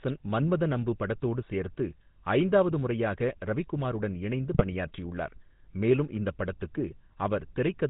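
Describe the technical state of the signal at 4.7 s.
GSM bit errors run from 4.53 to 4.75 s, just after "ஐந்தாவது முறையாக ரவிக்குமாருடன் இணைந்து", so 4.7 s falls inside the damaged stretch. Corrupted bits are reaching the speech decoder, garbling the filter, pitch and gain values it rebuilds each frame from. The spectrum warps and the level jumps frame by frame, and the speech breaks into squawks, pops and gargling. The span fits roughly ten 20 ms frames being hit.

Underneath, the GSM full-rate codec is present at this moment as throughout the clip. It rebuilds the voice from a vocal-tract model driven by regularly spaced pulses, with most of the excitation detail thrown away, and nothing above 4 kHz survives. The result is a plainly audible buzzy, gravelly roughness with a dull top end, which fits the 13 kbps full-rate coder.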